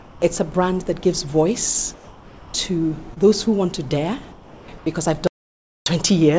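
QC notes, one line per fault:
0.00–0.22 s, 1.94–2.54 s, 4.32–4.68 s, 4.78–4.86 s: comfort noise in place of the background. In each pause the room sound, about 23 to 25 dB below the loud parts, turns into steady, featureless hiss about 1 to 4 dB quieter. This is likely the sender's discontinuous transmission, with the receiver synthesising noise until the sound resumes.
3.14–3.18 s: short concealed packet loss. About 20 ms of audio failed to arrive, and the decoder bridged roughly 23 ms by extending the preceding sound before crossfading back. The result is a brief smear in the audio.
5.27–5.86 s: audio dropout to silence. The sound cuts off abruptly for about 0.59 s and the gap is digital silence, with no room tone. The likely cause is the input feed being lost while the recorder kept writing silence. The content in that stretch is gone.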